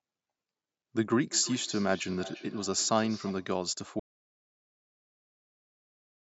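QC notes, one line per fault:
1.29 to 3.6 s, feedback echo between two devices. The speech comes round again at a steady interval of about a third of a second. Each pass sounds thinner and more ringing than the last. At its loudest the returning sound sits about 16 dB below the direct speech. A second device in the same room is replaying the call. This microphone captures that playback again. Its own echo canceller cannot remove sound from another device, so the loop keeps feeding back.
4.0 s to the end, audio dropout to silence. The speech stops abruptly in mid-flow and never returns. The gap is silent, with no room tone or background noise underneath. That points to silence being written, not to someone falling quiet. The likely cause is lost input, such as a disconnected device, a failed link or a stray mute, while recording carried on. Anything said after 4.0 s is unrecoverable.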